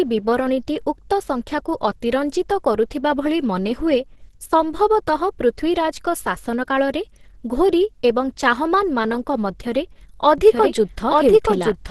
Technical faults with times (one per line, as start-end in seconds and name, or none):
0.00-11.90 Opus compression
10.38-11.90 doubled audio track